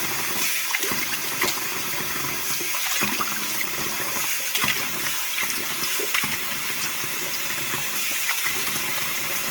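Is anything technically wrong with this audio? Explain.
Yes. Throughout the clip, the sound carries plainly audible Opus compression artefacts. Tonal parts come out rough and grainy, with a noisy texture in place of clean detail, yet there is little of the swirling or hollow dropout typical of MP3. The likely cause is Opus encoding in its music (CELT) mode at a rate that points to roughly 16 kbps. Short of bits, the encoder keeps each band's energy but refills the detail with folded lower-band content or noise. The bandwidth stays fullband, reaching about 20.1 kHz.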